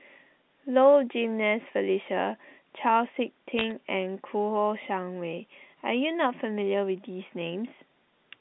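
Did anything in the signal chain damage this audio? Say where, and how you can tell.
Yes, bit errors on a digital phone line, so the damage is in the transmission stage. Between about 3.59 and 3.72 s there's a short burst of sharp ticks and crackle sitting on top of the speech, while the telephone-band sound around it, roughly 150 Hz to 3.7 kHz, is unchanged. Each flipped bit corrupts a single sample, and hits on the sign or upper bits jump the waveform hard. The density sounds like an error rate around a tenth of a percent.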